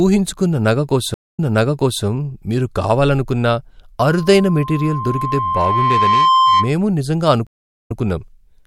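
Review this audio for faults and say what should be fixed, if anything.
A stream reconnect occurs twice, at 1.14–2.04 s and 7.47–7.97 s. After a flat gap in the waveform (230 ms, then 385 ms), a restarted decoder picks up 0.67 s and 0.12 s earlier, replaying audio. A longer playback buffer with seamless resume would prevent it.

A loudspeaker feedback squeal runs from 4.02 to 6.76 s. The mic-speaker loop exceeds unity gain at 1 kHz, so a tone swells over about two seconds to roughly 5 dB above the speech. On a spectrogram it shows as a brightening horizontal line at 1 kHz. Lower gain, better mic placement or a notch filter would stop it.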